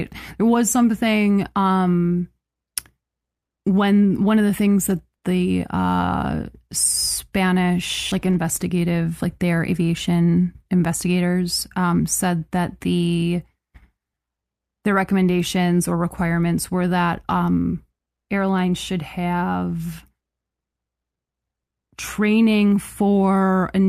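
At 8.11 s a skip ahead jumps playback forward, discarding around 0.4 s of queued speech with no silent gap, unlike a dropout, which leaves a hole. From 8.22 to 9.82 s a jitter buffer speed-up trims pitch periods, about 150 ms in total, so speech runs at 109% speed yet keeps its pitch, unlike a tape-style speed change.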